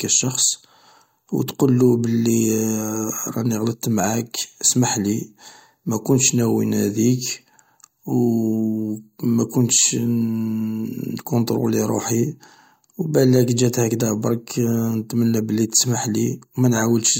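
No technical faults are audible anywhere in the speech recording.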